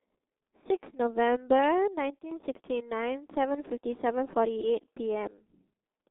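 Right from the start the whole thing has that G.723.1 codec sound: a very narrow phone line, roughly 200 Hz up to 3.6 kHz, with nothing at all above about 3.8 kHz. The heavy damage, which fits a bitrate around 6.3 kbit/s, comes from long 30 ms frames and a slowly updated voice model. It leaves the speech muffled and hoarse, and consonants smear into each other instead of landing crisply.

Then at 2.19 s there's a sudden gain jump. The level drops by about 12 dB in an instant, with the speech and the background noise falling together, and it stays down until 2.32 s. It's an abrupt step with no fade in or out. The likely culprit is a digital gain change or bit shift applied without any ramp, which is why the change is so hard-edged.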